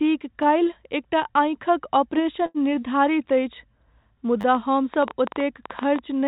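Speech, carried over a call path whose G.711-style band ends at 4 kHz, with a stuttering repeated buffer at 0.43 s and again at 4.41–4.44 s. A short piece, which fits a 10 ms buffer, plays twice and then four times, showing as identical waveform cycles with hard joins. A short stall from a late packet at 2.46–2.58 s holds one sound for about 84 ms, seen as a smeared, unchanging spectrogram band. From 4.55 to 6.00 s a train of clicks, about fifteen at an uneven pace near 10 per second and roughly 10 dB above the speech, appears as thin vertical spectrogram lines and sharp waveform spikes. Likely cause: electrical interference or a faulty connection or power supply.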